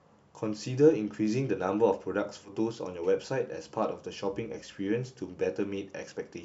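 A speech recording with one brief stumble between 2.45 and 2.51 s: the sound lurches forward, a short stretch simply missing. This is compressed frames skipped. A couple of whole coded frames never reached the output, whether lost from the file or rejected by the decoder as damaged, so playback jumped ahead by roughly 40 ms, consistent with two 20 ms frames.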